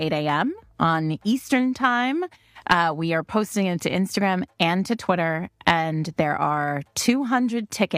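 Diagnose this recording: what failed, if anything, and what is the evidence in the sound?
Nothing failed; no fault is audible anywhere.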